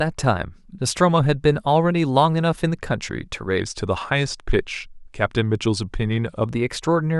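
From 3.60 to 6.46 s the speech drops into a wrong sample rate fault: the audio runs at 0.919 times normal speed and sits about 1.5 semitones lower, so it sounds slightly slow and heavy. The ratio fits 48 kHz material played at 44.1 kHz without conversion. Unlike a pitch shift or a time stretch, which change only one of the two, pitch and tempo fall together by the same factor, with no processing artefacts.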